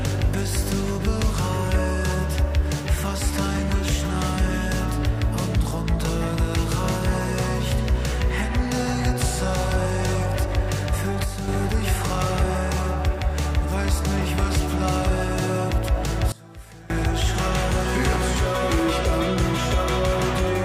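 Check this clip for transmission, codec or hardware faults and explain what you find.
Two sudden gain jumps are present. At 11.24 s the level drops by about 6 dB until 11.48 s. At 16.32 s it drops by about 19 dB until 16.9 s. Sound and background noise fall together, instantly. The likely cause is a gain change applied without a ramp.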